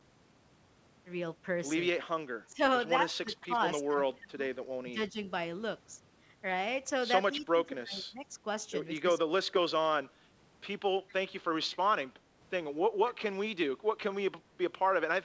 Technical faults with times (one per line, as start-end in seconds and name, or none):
1.95-2.60 speech suppressed in double talk
3.22-5.17 speech suppressed in double talk
3.34-3.79 echo leak
7.35-8.32 speech suppressed in double talk
7.37-7.41 echo leak
8.99-9.07 speech suppressed in double talk
11.08-11.13 echo leak